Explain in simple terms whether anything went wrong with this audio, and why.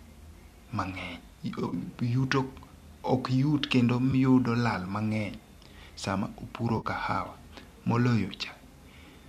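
Three brief glitches interrupt the speech, at 1.69 to 1.74 s, at 4.12 s, and at 6.77 to 6.86 s. Each sounds like a smeared, noisy blip. This is AAC frame loss with concealment. Small chunks of the stream went missing, roughly 30, 10 and 50 ms, which fits 10 ms frames. The decoder patched each gap by reusing the last good sound. The likely source of those frames is low-delay AAC compression, the kind used in video calls.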